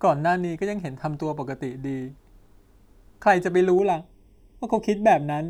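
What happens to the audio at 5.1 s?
Channel delay (comb filtering) covers 5.1 s, running from 3.79 s to the end of the clip. One channel arrives a fraction of a millisecond late, so the mono sum cancels at evenly spaced notches starting around 1.5 kHz, leaving the speech hollow and phasey.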